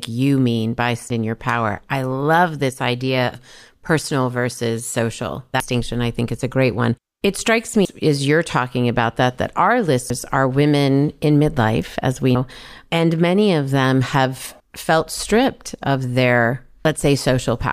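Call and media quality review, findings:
Audio missing between chunks: speech skips at 1.10, 5.60, 7.85, 10.10, 12.35 s, about a third of a second lost each. Likely chunk-boundary loss. Waveform shows a gapless splice, and the spectrogram a hard vertical seam.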